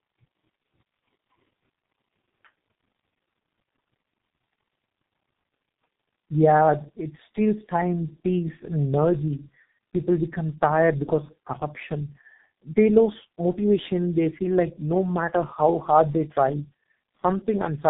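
Throughout, the speech carries tandem speech coding: two low-rate speech coders in a row, which fits a G.729A-to-G.723.1 path, the second re-coding the first's output. It sounds rougher, more muffled and warblier than any single narrowband codec would, with nothing above 3.8 kHz.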